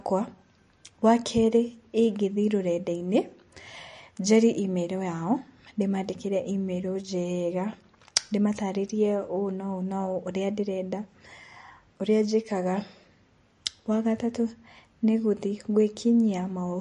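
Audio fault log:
Throughout: MP3 compression, likely the cause of plainly audible damage in this speech. Nothing sounds above about 10.6 kHz, a hard fixed ceiling rather than a gentle roll-off, and weak detail flickers in and out, giving a watery, swirly texture with chirpy s sounds and smeared attacks, which fits a low bitrate near 40 kbps.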